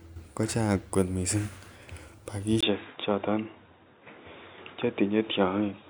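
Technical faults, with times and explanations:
2.61 s to the end, input switched to a poorer device: recording most likely moved to a narrower-band input, so after a 20 ms gap nothing above 3.8 kHz remains, the speech turns dull and boxy, level shifts around 5 dB, and faint new background noise appears.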